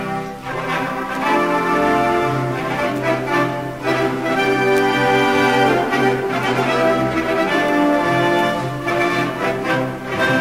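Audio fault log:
Throughout: crude rate conversion. Samples are repeated by nearest-neighbour picking, which fits a 44.1 kHz to 48 kHz change. This leaves a gritty, inharmonic fizz roughly 25 dB down that follows loud, bright passages, seen as stray aliased spectrogram lines and waveform stair-steps.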